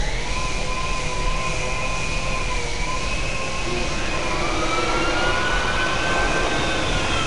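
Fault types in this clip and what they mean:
4-bit ADPCM compression: coarse 4-bit prediction steps leave a plainly audible gritty hiss that tracks loud sound; a spectrogram shows broadband noise fill and nothing above 10.6 kHz.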